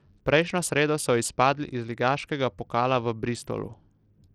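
From start to finish the speech carries plainly audible damage of the kind Bluetooth SBC compression produces, likely from a starved link whose sound fits a bitrate near 80 kbps. Too few bits reach the upper sub-bands, so the treble flickers in and out while a gritty, grainy noise and aliasing sit on the voice. A spectrogram would show the top bands blinking on and off in blocky patches, with coarse speckle filling the lower bands.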